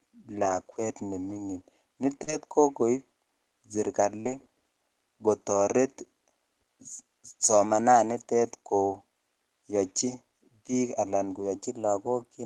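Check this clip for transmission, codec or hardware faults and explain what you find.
Three kinds of transmission fault affect this speech, all consistent with packet loss and clock drift on a call path.

Lost packet rebuilt from error correction at 0.41–0.55, 1.29–1.39, 2.27–2.33, 4.25–4.39 and 11.35–11.45 s (just after "koyochi biik anan"). Low-bitrate backup copies replaced lost packets, so there is no gap, but those stretches turn rougher and noisier.

Short concealed packet loss at 2.23–2.29 and 4.21–4.27 s. About 40 ms never arrived, and the decoder extended the preceding sound to fill it, leaving a brief smear or wobble.

Drift correction step at 7.65–8.19 s (just before "koyochi biik anan") and from 11.56 s to the end. Playback suddenly ran about 6% fast, raising the pitch by a semitone, likely because clock-matching software was draining its buffer.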